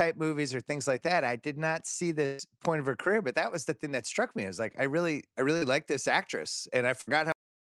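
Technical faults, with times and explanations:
2.25 to 2.41 s and 7.01 to 7.09 s, burst of packet loss. The first gap follows "I did not see" and runs about 140 ms. The receiver stretches the last sound across it and fades it, which gives a held, fading sound. Speech then resumes at "point of her career" with a stretch missing. The second gap follows "like this actress" and runs about 60 ms. It is a shorter smear that jumps ahead in the same way.
5.57 to 5.63 s, short concealed packet loss. Right after "like I really I", about 40 ms never arrived in time. The decoder fills the hole by continuing the preceding sound, then blends back into real audio before "like this actress". The result is a brief wobble or smear. The band limit near 12 kHz around it, which fits Opus at about 32 kb/s, is part of the call path.
7.32 s, cut-off end. The final buffers were never written or played. The audio stops mid-sound and drops straight to digital silence. 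There is no natural decay, so the ending sounds abrupt and clipped off.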